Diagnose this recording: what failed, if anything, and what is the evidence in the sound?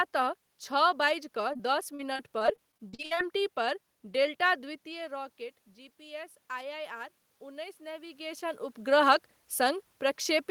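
Network stage. Repeated packet loss with robotic sound runs from 1.53 to 3.19 s. Sixteen short holes, the longest 52 ms, break the speech. Each is patched by extending the last sound, so about a fifth of that stretch is synthetic, choppy and robotic.

Call processing stage. From 5.96 to 8.69 s, the automatic gain control rises, lifting the level by about 5 dB. The input had dropped by about 15 dB. Speech and room noise swell together as the gain climbs over nearly three seconds.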